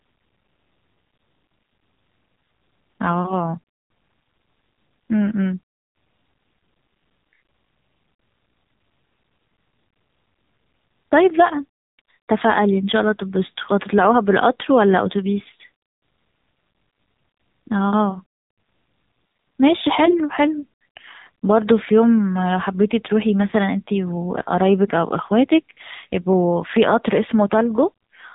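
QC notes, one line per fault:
throughout: AMR narrowband mobile codec. Nothing above 3.8 kHz survives, and the speech has a plainly audible buzzy, synthetic edge from being rebuilt by a vocal-tract model with sparse pulses, which fits a low 7.4 kbps mode. A plain low-pass filter would muffle without adding buzz.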